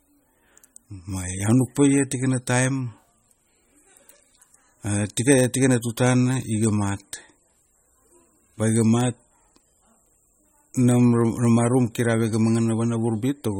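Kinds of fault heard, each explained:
MP3 compression: the speech has a plainly audible watery, swirly texture and nothing above 16.6 kHz, likely a starved MP3 encoder running around 33 kbps.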